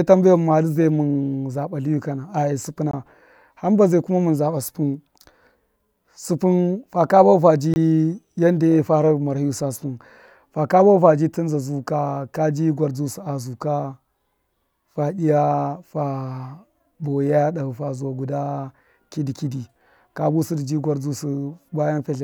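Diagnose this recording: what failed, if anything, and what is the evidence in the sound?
The driver or buffer stage failed, leaving two blocks of digital silence in the speech. The sound drops abruptly to silence at 2.91 s and again at 7.74 s, each time for about 21 ms, with no fade in or out. Both gaps are the same length, which fits a 1024-sample buffer going out unfilled when the program missed its deadline.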